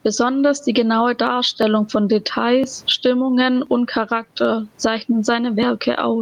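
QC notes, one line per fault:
Throughout, gain pumping: the input gain is likely set far too high for the microphone, with a fast limiter pulling it down on every loud syllable and releasing it in each pause. The room noise sits about 44 dB below the speech, and the level swings by some 15 dB. Loud and soft passages end up squashed close together, giving a breathing, pumping sound.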